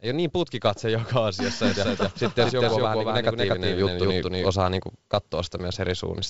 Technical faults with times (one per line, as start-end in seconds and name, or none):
1.64-4.50 doubled audio track